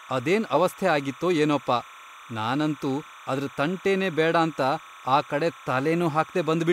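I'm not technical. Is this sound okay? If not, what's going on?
No. This clip has timecode bleed. A timing signal, the code that keeps cameras and recorders in sync, leaked from a nearby cable or track into the speech recording. That code flips rapidly between two high pitches, around 1 and 2 kHz, in a pattern that repeats 30 times a second. From start to finish you hear a steady chirping, buzzing warble sitting quieter than the speech, behind it.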